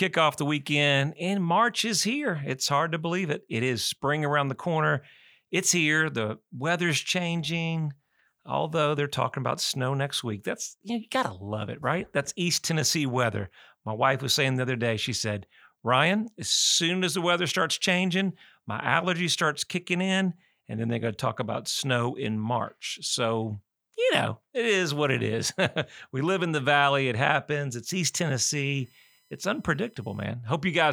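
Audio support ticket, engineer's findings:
USB whine, 28.24 to 30.24 s. Fixed-pitch tone on a 1 kHz fundamental, strongest at the 5 kHz harmonic, sitting about 40 dB below the speech.

Probable component: USB interface or its cable. The bus's 1 ms frame timing pulls current, and that leaks into the audio through shared power or ground. Worth trying a different port, a powered hub, or a ground-isolated path.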